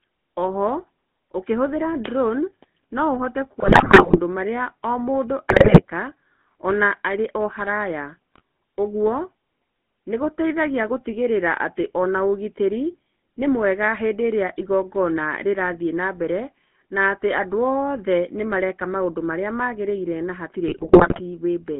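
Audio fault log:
Throughout: GSM full-rate codec. The speech is carried at 13 kbps through a vocal-tract model fed by a sparse, regularly pulsed excitation, and the line band runs only from about 150 Hz to 3.5 kHz. This gives the plainly audible buzzy, gravelly roughness and a muffled top end.
3.60 to 4.20 s, 5.50 to 5.83 s, 8.34 to 8.41 s, 20.68 to 21.21 s: GSM bit errors. Corrupted bits hit the decoder, with bit error rates from about 1.9 to 7.1 percent. Damaged filter, pitch and gain values warp the spectrum and spike the level frame by frame. The result is squawks, pops and gargling, worst in the 5.50 s burst. The last burst comes right after "marĩa magĩrĩire na hatirĩ".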